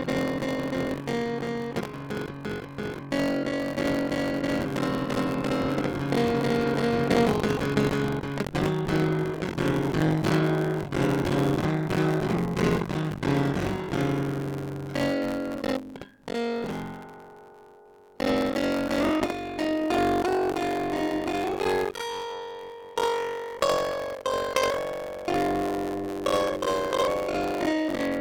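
Music, with buffer tearing throughout: the writer and the playback hardware have slipped, so about 40% of each buffer replays audio about 70 ms stale, producing a steady 46.9 Hz rattle that fits a 1024-sample buffer.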